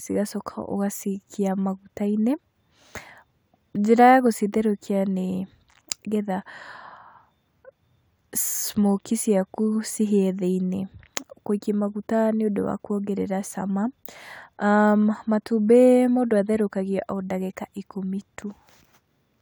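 No technical faults can be heard anywhere in the recording. The sound holds steady from beginning to end, with nothing that calls for comment.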